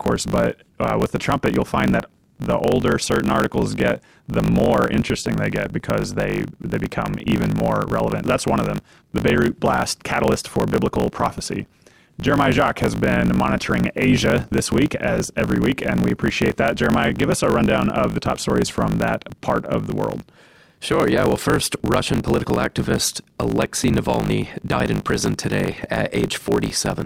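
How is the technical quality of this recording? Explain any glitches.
The speech carries a steady buzz and runs fast throughout. A 50 Hz buzz underlies the clip, and delivery is 1.16 times too quick at near-normal pitch. This is a block size mismatch (truncated): one stage writes longer blocks than the next reads, which fits 1024-sample blocks, so each block's end is discarded.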